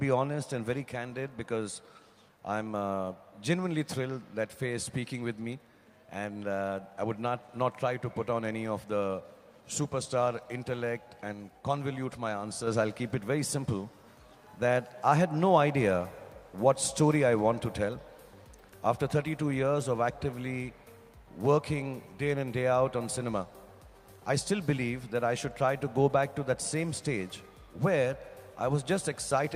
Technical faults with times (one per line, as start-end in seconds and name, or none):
none